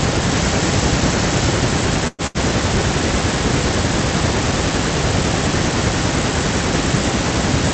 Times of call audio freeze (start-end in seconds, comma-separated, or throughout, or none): 2.07-2.22